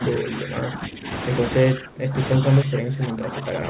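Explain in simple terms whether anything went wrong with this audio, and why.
Something did go wrong. The speech turns quieter three times: from the start to 1.08 s, from 1.73 to 2.18 s, and from 2.63 s to the end. The middle dip is deepest. This is likely speech suppressed in double talk. Both sides spoke at once, and the echo canceller turned this talker down too.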